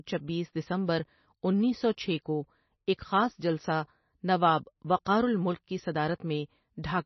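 From start to finish the speech carries heavy damage of the kind MP3 compression leaves, most likely from encoding at a very low bitrate, roughly 25 kbps. Starved of bits, the encoder has discarded everything above 5.9 kHz and dropped weaker frequency lines that flicker in and out between frames, giving a watery, swirling texture, chirpy s sounds and softened consonant attacks. A spectrogram shows a flat ceiling at 5.9 kHz with blotchy, speckled gaps beneath it.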